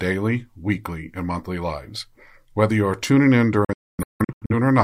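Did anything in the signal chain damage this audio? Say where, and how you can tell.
Yes. A digital broadcast dropout runs from 3.65 s to 4.52 s. The speech breaks into several short holes spread over about 850 ms, with about 640 ms missing in total and the longest single gap 256 ms. Each cut fades out in about 3 ms rather than clicking. This happened at reception: the receiver lost the digital signal or got frames that failed their checksum, so it muted until clean frames returned, and that audio is gone.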